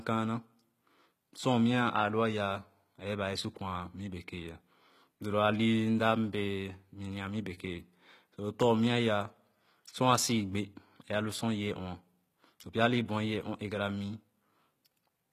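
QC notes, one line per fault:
Throughout, likely HE-AAC compression: s sounds gritty and lispy from rebuilt treble, fitting roughly 20 kbps; spectrogram shows copied upper bands, nothing above 14.9 kHz.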